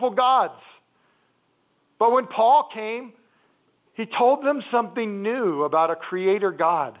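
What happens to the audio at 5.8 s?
Nothing goes wrong at 5.8 s: the speech carries straight through that moment intact, with only the steady narrowband character of A-law telephone coding and no break, click or distortion.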